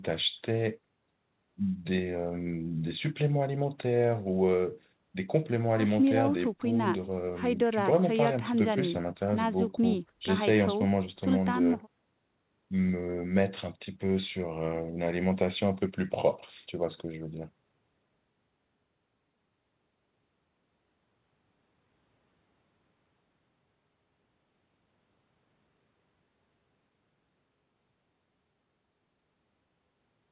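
No faults can be heard in the speech, which carries the narrowband character of a G.711 mu-law call path at 64 kbps, with nothing present above 4 kHz.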